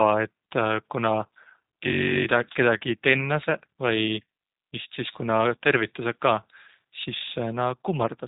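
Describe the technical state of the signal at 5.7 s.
At 5.7 s the speech carries G.729 codec damage, present throughout the clip. The codec rebuilds speech from a vocal tract model, pitch prediction and sparse pulses, which fits an 8 kbit/s stream. Nothing passes above 3.8 kHz. The result sounds plainly rough and synthetic.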